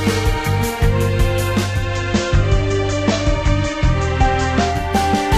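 At 1.55 s the sound shows digital radio blending to analogue: the receiver loses the digital stream and cross-fades, over about 0.43 s, to the FM broadcast of the same station. During the FM stretch a faint hiss, roughly 30 dB below the signal, sits underneath, with no change in level. At 5.01 s it blends back to digital, removing the hiss.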